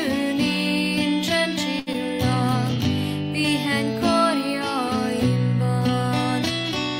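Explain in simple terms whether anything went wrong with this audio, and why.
Two things went wrong, close together.

From 1.79 to 1.89 s there is a short stall from a late packet. A piece of audio arrived late, so the receiver ran out of sound and stretched the last bit for about 74 ms until it showed up. Nothing is lost, but that moment is held a little too long and may buzz or dip slightly.

From 1.93 to 1.96 s there is short concealed packet loss. About 20 ms of audio never arrived at all, and the receiver covered the gap by carrying on the sound just before it and then blending back in. It comes across as a quick smear or wobble.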